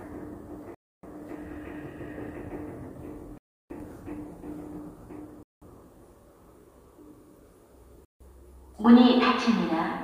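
Bluetooth stall, likely, at 0.75–1.03, 3.38–3.70, 5.43–5.62 and 8.05–8.20 s: the sound drops to silence for 160–320 ms and then resumes, showing as flat waveform gaps and blank spectrogram columns.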